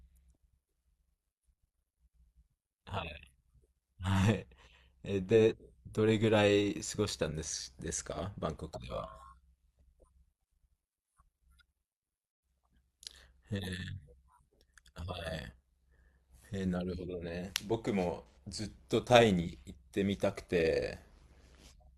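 A metallic buzz with extra tones runs through the whole speech clip, the level pulsing by about 6 dB at around 100 Hz. This is overlap-add ripple: frames were windowed and rejoined with overlaps that don't sum to constant gain, so loudness dips once per frame.

From 8.06 to 8.18 s, a brief smeared, noisy patch replaces the sound, and again from 18.28 to 18.37 s a longer one. This is AAC frame loss with concealment. The decoder filled the gaps of roughly 43 and 85 ms, which fit one and two lost frames, from the last good spectrum.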